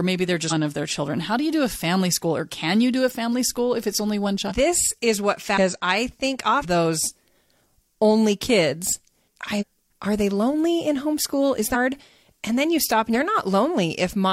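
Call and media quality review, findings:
Compressed frames skipped: the speech jumps ahead at 0.47 s (after "maybe they're"), 4.46, 5.53, 6.60, 9.57, 11.71 and 13.10 s, losing roughly 0.2 to 1 s each time. The decoder drops frames that are missing or rejected as damaged; the jump sizes fit frames of about 46 ms.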